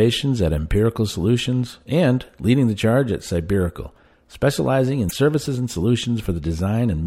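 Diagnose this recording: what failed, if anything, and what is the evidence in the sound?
The failure sits in the codec stage: damaged data in a compressed stream. From 5.06 to 5.13 s the speech breaks up. The decoder misreads corrupt frames and resyncs at the next header. Packet-loss concealment would smear or fade the gap instead.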